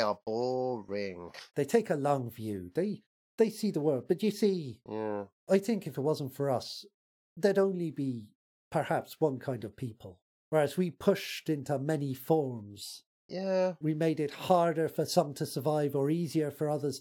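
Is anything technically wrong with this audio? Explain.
Yes. Clock slip clicks run from 0.43 to 16.90 s as faint ticks about every third of a second, likely from two unsynchronised clocks drifting around 70 ppm apart and slipping one sample each time. They show as thin vertical spectrogram lines and tiny waveform discontinuities.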